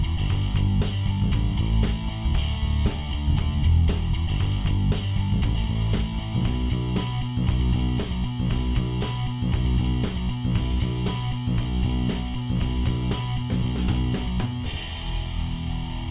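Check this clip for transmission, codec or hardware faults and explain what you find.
Nothing audible in the signal points to a transmission, codec or hardware problem at any point in the clip.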